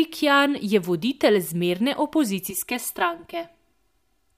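From 2.50 s to the end, the speech turns hollow and phasey: channel delay (comb filtering). One channel arrives about 3 ms late, and summing to mono cancels shared content at evenly spaced frequencies, with the first notch near 150 Hz and further notches above it.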